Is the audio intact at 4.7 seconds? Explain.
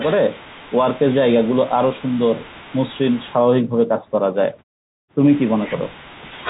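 Yes, the audio is intact at 4.7 seconds, with no dropout, glitch or distortion at that point.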